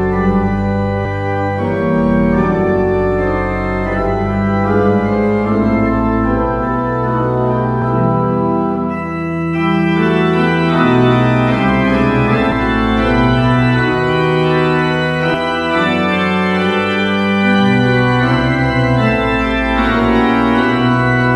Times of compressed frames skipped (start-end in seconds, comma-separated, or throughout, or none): 1.05, 7.81, 12.52, 15.34